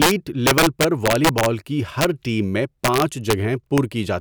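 Integer overflow strikes at 0.02–0.11 s, 0.47–1.46 s, 2.01–2.05 s, 2.85–3.33 s and 3.78 s. Speech peaks driven about 1 to 4 dB past the integer limit wrap to the opposite sign instead of being held, giving violent cracks far sharper than clipping.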